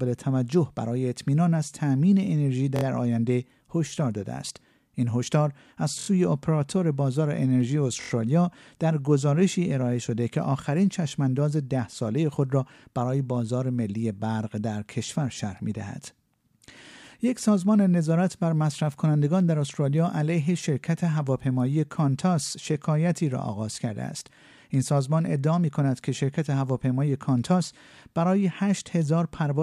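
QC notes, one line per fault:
2.76–2.83 s, 5.99–6.08 s, 8.01–8.10 s, repeated buffer: each is a short, hard-edged stutter in the speech, a piece of about 23 ms heard three extra times at the first point and four extra times at the other two, with an abrupt join at every repeat. New audio arrived late, so the device replayed its last block, which fits a 1024-sample buffer. The speech resumes where it left off, so essentially nothing is lost, only delayed.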